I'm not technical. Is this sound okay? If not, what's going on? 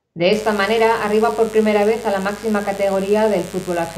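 No. From 0.32 s to the end there is mains buzz, a steady raspy hum from the 50 Hz power supply leaking in, audible beneath the speech.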